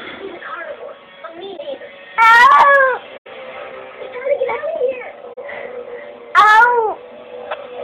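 At 1.56 to 1.59 s, 3.16 to 3.27 s and 5.33 to 5.38 s, corrupt frames are concealed: the decoder detected damaged AAC frames and muted or replaced them, leaving brief gaps or smeared patches across the spectrogram. At 7.50 to 7.55 s, about two corrupt frames were decoded anyway, putting energy at wrong frequencies; it shows as a stray spectral burst over a short waveform blip.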